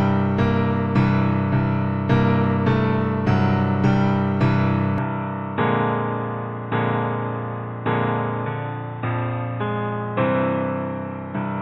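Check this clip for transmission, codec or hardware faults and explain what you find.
One fault: from 4.98 s to the end, the sound abruptly turns dull and boxy, with nothing above 3.8 kHz, drops about 5 dB in level, and picks up a faint new noise floor, with no gap at the change. This likely reflects the input switching to a poorer device with a narrower band and its own tone and noise.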